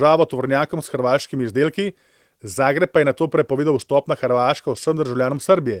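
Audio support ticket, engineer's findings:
Speech signal checked across the full clip with no technical defects found; level, continuity and timing all within normal bounds, no action required.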